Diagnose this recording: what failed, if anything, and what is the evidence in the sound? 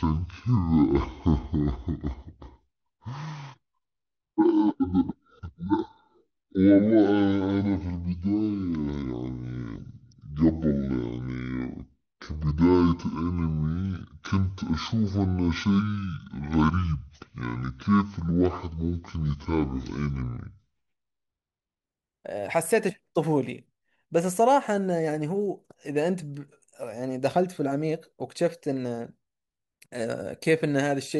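Section at the wrong speed, from 0.0 to 21.84 s: the speech runs at about 0.53 times its recorded rate, dropping roughly ten semitones and sounding deep and dragged, then snaps to normal. Speed and pitch move together, pointing to a likely playback or editing stage running on the wrong clock.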